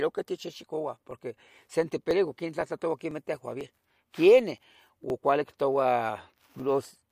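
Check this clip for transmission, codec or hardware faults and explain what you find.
One fault: periodic USB or driver dropouts, from 0.11 to 6.60 s. Every 0.5 s, about a millisecond of speech is skipped, roughly fifteen times, as a background task stalls the driver, giving regular ticks.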